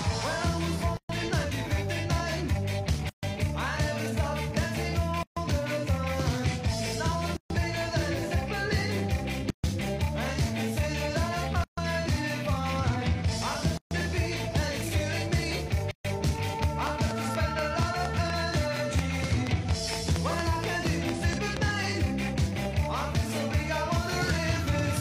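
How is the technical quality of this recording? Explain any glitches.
The recording has two kinds of fault: repeated dropouts in its first 16 seconds and a run of ticking later on.

Gap at a join of encoded pieces, at 0.97, 3.09, 5.23, 7.37, 9.50, 11.64, 13.77 and 15.91 s. The audio was encoded in pieces about 2 s long and joined untrimmed, so encoder start delay and end padding remain. Each gap lasts about 136 ms, the first 123 ms, before the sound resumes.

Train of clicks from 16.63 to 21.58 s. About 20 similar clicks arrive at a regular 4.3 per second, roughly 20 dB above the surrounding sound, heard as steady ticking. The likely cause is interference from nearby equipment or a faulty connection or power supply.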